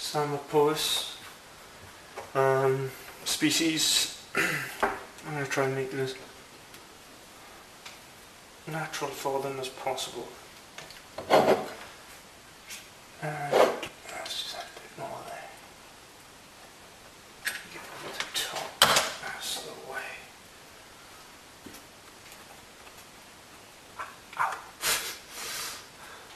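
Damaged data in a compressed stream shows up at 13.85 to 13.88 s as a brief glitch in the audio. Corrupted bytes there left the decoder unable to read those frames, so it lost sync and searched for the next valid frame header.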